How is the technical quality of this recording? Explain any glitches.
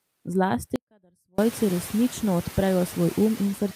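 The recording has two clear technical problems: a noise suppressor working on the speech throughout, and a hard dropout early on.

From 0.76 to 1.38 s there's an audio dropout to a faint residue. The speech vanishes abruptly for about 625 ms, and what's left in the gap is only a faint trace, something like 35 dB under the normal level. The cause is likely the wanted signal being lost upstream while the rest of the path stayed live, which is why you get that thin leftover instead of true silence or a natural pause.

The noise suppressor artifacts run the whole length. The suppressor is pulling down whatever bands it judges to be steady noise, frame by frame, by about 12 dB. So the background dips between phrases and creeps back up under the speech. It matters more after about 1.5 s, when the room noise itself climbs by about 18 dB and sits roughly 18 dB below the speech, giving the suppressor more to chew on.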